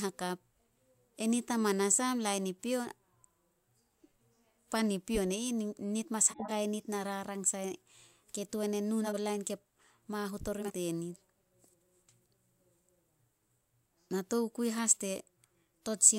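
Around 6.30 to 6.51 s, just before "nit na rarang", the speech jumps forward: compressed frames skipped, so roughly a tenth of a second never plays. The same happens at 8.99 to 9.16 s, between "e nu" and "lain ke mahut ori", and again at 10.61 to 10.72 s right after that phrase, where a bit more drops out.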